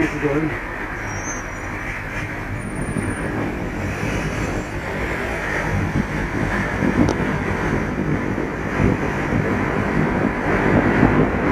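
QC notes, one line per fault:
throughout: channel delay (comb filtering), about 20 ms lag, mono sum notches near 30 Hz, every 50 Hz; rough, slightly doubled; spectrogram shows evenly spaced dark stripes.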